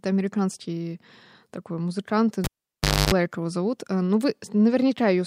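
A speech clip where the cable gets pulled and plugged back in right after "американский такой музыкант": a pop at 2.44 s, roughly 0.64 s unplugged, including about 0.28 s of 50 Hz mains buzz as the plug tip touches. Another pop at 3.14 s, before "его зовут".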